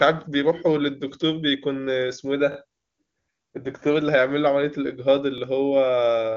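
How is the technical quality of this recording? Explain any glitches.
Two short stutters mar this speech recording, which is band-limited to about 7.1 kHz, as with AMR wideband (HD Voice) at a high rate. At 2.52 s and 5.38 s there is a repeated buffer: audio arrived late, so a 20 ms block replayed twice, then once, giving a hard-edged stutter.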